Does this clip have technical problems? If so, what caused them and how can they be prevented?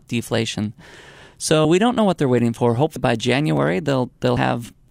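Yes. Two kinds of fault are audible in this speech clip.

Clock drift buffer slips: from 1.16 s to 4.79 s there is a regular click roughly every 1.28 s, about four in all. The likely cause is two devices running on independent clocks that differ by around 500 parts per million. The buffer between them drifts until a few tens of samples are dropped or repeated, producing each click. To prevent it, lock both devices to a shared word clock or use adaptive resampling at the boundary.

Compressed frames skipped: at 1.65 s the audio jumps ahead by about 70 ms, and at 2.96 s by about 100 ms. These fit whole 32 ms codec frames going missing, two at the first point and three at the second. To prevent it, protect the stream or file against loss and corruption, and have the decoder conceal bad frames rather than silently discarding them.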